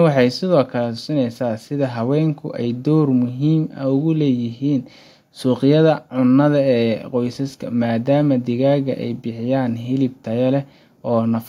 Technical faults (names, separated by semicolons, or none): none